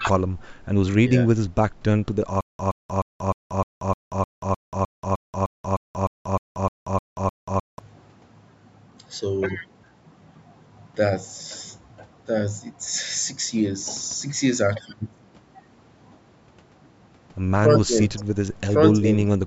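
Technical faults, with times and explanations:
2.41–7.79 s, stutter with silent gaps: a 121 ms fragment of the speech plays, then about 184 ms of digital silence follows, and the cycle repeats 17 times at a steady 305 ms period. The likely cause is a stalled player or stream that replays its last buffered fragment on each retry and then runs dry. The even rhythm comes from the fixed retry interval, and the speech that should have filled those five seconds is missing.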